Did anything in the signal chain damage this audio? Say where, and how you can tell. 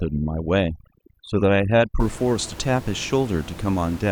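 Yes. Overdone noise removal in the call processing stage affects the first 2 seconds, from 0.0 to 2.0 s. The background drops there and breaks up into small twinkling specks. A suppressor set too aggressively is gating individual frequency bands whenever they sit near its noise estimate. Quieter parts of the speech fall into those bands and vanish with the noise. After 2.0 s the room noise returns, about 17 dB below the speech.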